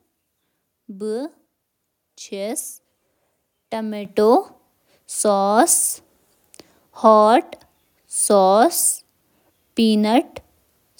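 At 4.05 s the microphone volume is stepped up: the input gain jumps by about 9 dB in one instant, lifting the speech and the background noise together. Because the noise floor rises with the speech, this is a change at the capture device, not the talker leaning closer.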